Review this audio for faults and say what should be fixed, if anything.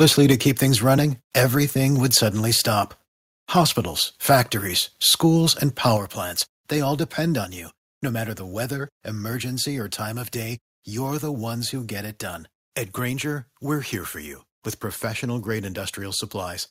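Microphone overload occurs from 0.0 to 0.32 s (about 5 dB over), at 2.15 to 2.17 s and at 5.85 to 5.87 s (about 2 dB each), just before "plants they all depend". The sound is a harsh crackle on the loudest peaks, most likely because the input gain drove peaks past the converter's limit. On the waveform, peaks are flattened. On a spectrogram, broadband splatter rises above the harmonics. Lower the input gain to prevent it.

The microphone volume is stepped down at 0.32 s (about 4 dB) and at 5.97 s (about 6 dB). Voice and background both drop abruptly right after the clipped peaks. The likely cause is the call software cutting the device's input volume in a single step. The waveform envelope shows a sudden stair-step drop, and the whole spectrogram dims at once. Setting the gain correctly beforehand, or disabling automatic input adjustment, prevents it.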